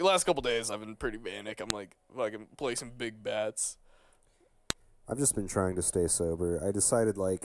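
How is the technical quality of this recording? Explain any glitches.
The recording is marred by two sharp clicks, at 1.70 s and 4.70 s, exactly 3 seconds apart. That is a file header played as audio: pieces were joined with their WAV headers intact, so those few dozen bytes play back as a brief, loud snap where each new piece begins.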